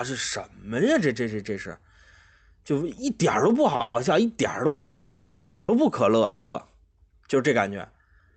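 At 3.76 to 3.81 s there is a short stall from a late packet: a packet missed its playout time, the jitter buffer ran empty, and the receiver stretched the last sound by about 30 ms until the packet arrived. Playback then resumed from the same point, so nothing is lost. What is heard is a sound held too long, with a slight buzz or dip.

Directly after it, from 3.81 to 3.96 s, comes the first call audio freeze. Two more follow, from 4.66 to 5.70 s and from 6.24 to 6.56 s. The likely cause is packets held up in transit until the jitter buffer ran dry. The receiver fills each wait by continuing the last sound as a buzz or hiss that fades, for 130 ms, 1020 ms and 300 ms respectively. None of the three drops to silence. When packets return, the audio carries on from where it stopped, so each freeze inserts a gap and pushes everything after it later rather than removing anything. All of this sits on the narrowed top end of the Opus call path, which cuts off above about 8 kHz.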